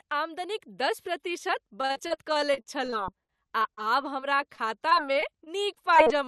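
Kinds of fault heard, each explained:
Repeated packet loss (robotic sound): audio keeps dropping out, each hole patched by stretching the previous sound, so 1.81 to 3.89 s turns choppy, about a fifth concealed, gaps up to 41 ms; a milder run follows from 4.20 to 6.08 s.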